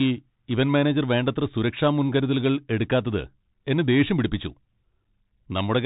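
From start to finish the speech carries Bluetooth CVSD headset codec damage, plainly audible. Nothing passes above 3.8 kHz, s sounds turn scratchy, and a granular hiss sits underneath, the sign of a one-bit delta coder whose adaptive step lags loud high sounds, unlike a plain low-pass.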